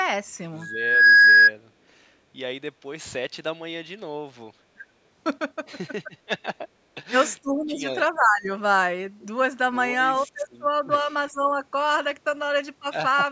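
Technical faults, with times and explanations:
1.02–1.22 s, echo leak: a faint, delayed copy of the speech trails in about 0.40 s behind the original, well below the main speech level. This is likely a loudspeaker echo on the far end that its echo canceller failed to fully remove.
4.75–4.84 s, 6.05–6.11 s, 6.80–7.15 s, 7.42–7.84 s, 8.12–8.49 s, 10.24–10.91 s, 11.30–11.56 s, speech suppressed in double talk: the speech level drops, from dips of about 10 dB to deep, near-gaps. These are likely moments when both sides spoke at once and the echo canceller turned down the talker along with the echo.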